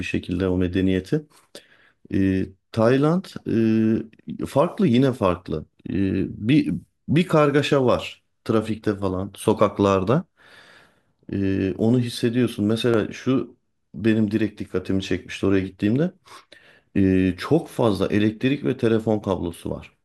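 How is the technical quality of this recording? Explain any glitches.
Two sharp clicks break into the speech, one at 12.94 s and another at 17.66 s. Each is a single, instantaneous tick that stands out from the surrounding audio and shows up as a thin vertical line running through the spectrum. The likely cause is dropped samples: a fraction of a millisecond of the stream went missing, so the waveform jumped abruptly from one value to a later one. That gap is far too brief to remove any audible sound, leaving only the click.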